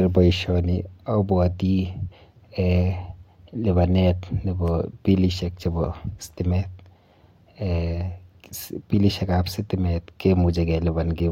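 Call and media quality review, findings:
Block of digital silence at 4.68 s in the speech, about 0.34 ms long. It is heard as a single sharp tick, not a hole. Probable component: playback or processing output buffer not filled in time, so the samples were zeroed. The waveform drops straight to silence and jumps back with no fade. Both hard edges land within a fraction of a millisecond, so they fuse into one click. A dropout with fade-out or a concealed packet loss would sound muffled or smeared instead.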